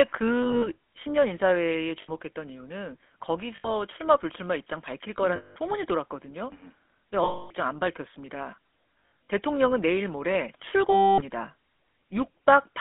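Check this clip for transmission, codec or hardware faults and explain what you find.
Two faults are present: GSM full-rate codec coloration throughout the speech, and seven bursts of lost GSM frames.

GSM full-rate codec, whole clip: the band runs only from about 250 Hz to 3.5 kHz, and the excitation is rebuilt from sparse regular pulses, giving a plainly audible buzzy, gravelly grain consistent with a 13 kbps coder. Plain band-limiting would sound dull without that roughness.

Lost GSM frames at 0.42 to 0.69 s (scattered, longest run roughly 70 ms), 2.02 s (60 ms), 3.56 s (80 ms), 5.36 s (200 ms), 7.24 s (260 ms), 9.01 to 9.11 s (scattered, longest near 70 ms) and 10.92 s (260 ms). The decoder repeats the last good frame, producing a rough metallic ring, not the clean gap of simple dropouts.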